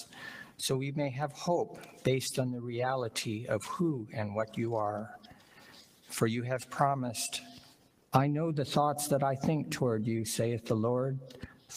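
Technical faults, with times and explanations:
Throughout: noise suppressor applied to music or sounds. A speech-tuned suppressor was left running, so it keeps treating steady tones, ambience and tails as noise and pulling them down. Level swings by around 10 dB, giving a pumping, thinned-out feel while sharp attacks slip through.
0.05–0.21, 0.44–0.59, 1.65–2.06, 2.54–2.73, 4.01–4.16, 5.17–6.11, 7.41–8.13 and 11.29–11.71 s: sound cut by the noise suppressor. In these stretches the held or decaying parts get clamped harder, dropping by about 4 to 10 dB. The longest is nearly a second, around 5.2 to 6.1 s.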